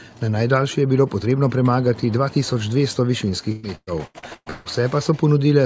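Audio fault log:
3.52–4.68 s, repeated packet loss (robotic sound): six dropouts arrive in quick succession, the longest about 152 ms. Each is bridged by stretching the preceding sound, so roughly half of this 1.16 s span is patched rather than real, and the result turns choppy with pieces missing. A spectrogram shows smeared, repeated frames and abrupt seams, all capped near 8 kHz by the G.722 call path. The waveform shows stuttering, looped-looking blocks.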